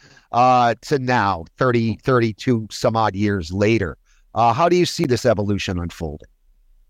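A block of digital silence at 5.04 s in this speech recording drops about 10 ms to zero, likely an unfilled output buffer, leaving a short tick-like hole.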